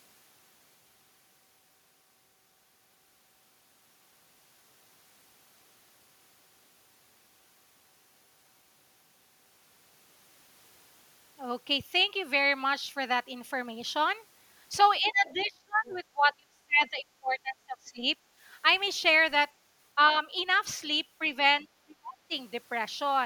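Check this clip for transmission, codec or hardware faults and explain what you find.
Two echo-canceller faults appear in the speech, both most likely from the far end talking at the same moment.

Speech suppressed in double talk occurs at 15.0–18.06 s, 19.95–20.15 s, 21.61–21.65 s and 21.86–22.31 s. The echo canceller likely mistook overlapping talk for echo and turned the talker down. The longest stretch dips deeply, by about 30 dB, and the last by about 35 dB. The two short ones are only slight dips.

The other side's voice leaking through appears at 15.38–15.45 s, 15.85–15.98 s and 18.72–18.77 s. These are faint, brief scraps of a second voice, likely loudspeaker echo the canceller failed to remove. The loudest is at 15.85 s.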